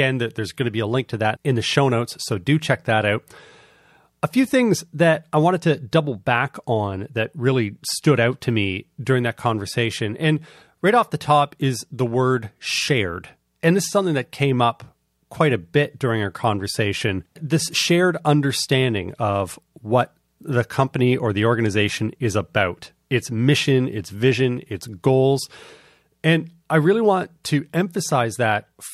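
Pre-echo at 27.44 s, just after "I really want": a short hiss about 17 dB above the quiet background arrives some 11 ms before a sharp attack. The codec kept a long block, which fits a 26 ms window, and spread its quantisation noise ahead of the attack, softening it.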